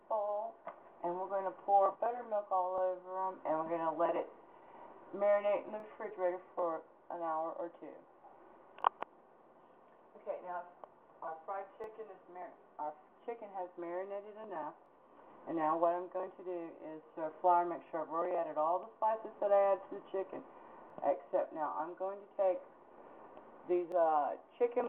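Every three seconds or so there's a little stutter, at 2.78–2.80, 5.80–5.82, 8.82–8.84, 11.84–11.86, 14.86–14.88, 17.88–17.90, 20.90–20.92 and 23.92–23.94 s. That's overlapping chunks. The audio was handled in 3.0 s blocks, and each new block starts 20 ms before the previous one finished, so that sliver plays twice at every join. You hear it as a small click or hiccup, ticking along at a steady rate.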